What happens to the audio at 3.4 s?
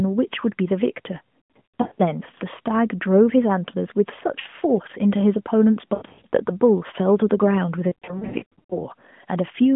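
Nothing goes wrong at 3.4 s: the speech carries straight through, with only the narrow telephone band of the AMR narrowband mobile codec that runs throughout.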